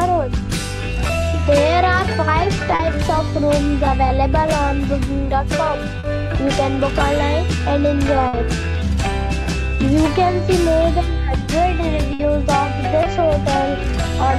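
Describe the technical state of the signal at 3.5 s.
At 3.5 s the signal is intact, with no dropout, distortion, glitch or other fault to be heard at that point.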